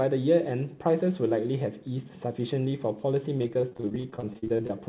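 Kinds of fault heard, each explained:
Repeated packet loss (robotic sound): From 3.38 to 4.71 s, over twenty short holes hit the stream, the longest 42 ms. Each is filled by stretching the sound just before it. About a third of that span is patched, so it sounds choppy.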